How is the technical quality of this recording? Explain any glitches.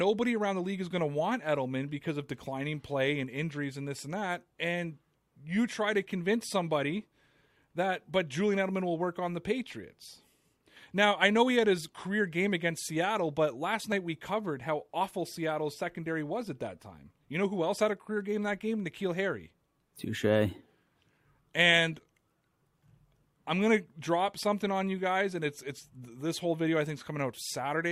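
Nothing stood out as a technical problem on listening to this speech recording.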